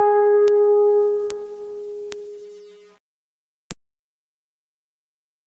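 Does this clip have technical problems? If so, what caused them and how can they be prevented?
Yes. Gain pumping runs through the whole piece of music, with the level swinging by around 15 dB, so loud and quiet parts sit squashed together. The likely cause is input gain set far too high for the microphone, with a fast limiter or compressor clamping down on every peak. Lowering the input gain until peaks no longer hit the limiter prevents this.

Bit error spikes appear at 0.48, 1.30, 2.12 and 3.71 s as single sharp ticks, broadband and unrelated to the music. Each is one or two corrupted samples whose value jumped by a power of two and snapped back, from a flipped bit in memory or on a digital link. Using error-checked, well-shielded digital connections and reliable memory prevents these.

The top end stops at 8 kHz, which fits a call path using a 32 kbps Opus stream and is expected on such a path.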